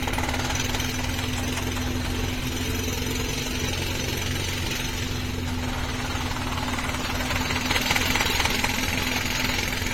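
Throughout this everyday sound recording, the audio has a swirly, smeared and hollow quality, with transients softened so that sharp onsets lose their edge, and nothing is present above about 16.6 kHz. This is likely generation loss: the material seems to have been through a lossy codec such as AAC-LC around four times at modest rates, each re-encode quantising again on a shifted frame grid, so noise and spectral gaps accumulate beyond what one pass would leave.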